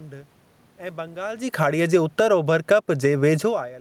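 Right after "ऐं बंगाल जी", at 1.46 s, the automatic gain falls. The gain control decides the input is too loud or its background too strong and pulls its level down gradually until about 2.71 s, roughly 7 dB in all. You hear the speech start out loud and then sink, with the room noise sinking right along with it. That shared drop in the background is the giveaway, since the talker shifting position around 1.5 s wouldn't take the room with it.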